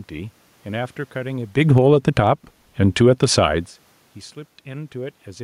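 A speech recording with automatic gain falling at 1.53 to 2.15 s, pulling the level down by about 8 dB. The control judged the input too loud, or its background noise too strong, and eased its gain back over roughly 0.6 s. The room noise sinks along with the voice, which separates it from the talker shifting position near 1.5 s, where only the voice would change. On a waveform the envelope tapers over that stretch, and on a spectrogram the noise floor darkens across all frequencies at once. Overlapping it, automatic gain rising runs from 1.84 to 2.64 s, lifting level by about 4 dB. The control found the sound too quiet, so voice and background swell together. The waveform envelope widens smoothly and the spectrogram's background band brightens in step with the speech. A second automatic gain falling follows at 2.79 to 3.34 s, a smaller drop of about 3 dB. It is another gradual cut that takes the whole signal down, noise floor included, visible as a gentle downward slope in the envelope. 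It is distinct from the talker's movement around 3.5 s.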